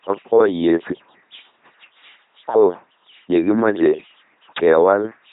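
From start to finish the speech has a buzzing, mechanical robot quality, with stray buzz or hiss where voicing is misjudged and nothing above 3.8 kHz. This is heavy LPC-10 vocoder damage: each moment is resynthesised from pulses or noise through a simple vocal tract filter, consistent with a 2.4 kbit/s rate.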